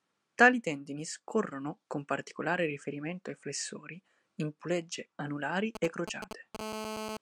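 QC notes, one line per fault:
5.75–6.57 s, GSM signalling bursts: right after "flessori in pulegge anulari" the speech picks up a galloping dit-dit-dit of hard ticks and clipped buzz fragments, fairly loud, roughly 5 dB below the speech. A nearby 2G phone is exchanging short control bursts with the network, and the audio circuit rectifies each group of radio pulses, so the 217 Hz burst rate comes through as brief buzzes separated by gaps rather than a continuous tone.
6.59–7.17 s, GSM phone buzz: the ticking turns into a steady, raspy 217 Hz buzz, thick with harmonics and with no relation to the speech, sitting about 6 dB below it to the end. The phone has now moved into a call and transmits its bursts continuously at 217 per second. The circuit demodulates that pulse train into an unbroken buzz, and the sharp edges of the pulses produce the dense harmonic rasp.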